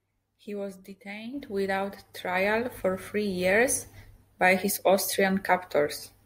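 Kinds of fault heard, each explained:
No technical faults heard.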